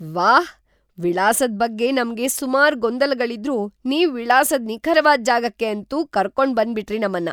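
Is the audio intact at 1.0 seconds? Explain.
Yes, the speech at 1.0 seconds is intact, with no dropout, click, distortion or other fault at that point.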